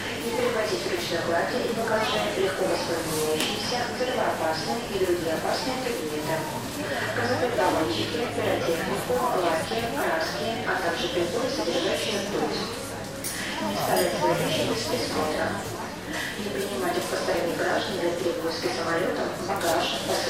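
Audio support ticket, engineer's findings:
Overlap between stream segments: clicks or micro-skips at 5.35, 11.37 and 17.34 s, spaced about 6 s apart, matching segment boundaries. Overlapping timestamps trimmed real audio. Waveform shows abrupt discontinuities, and the spectrogram shows thin broadband vertical lines.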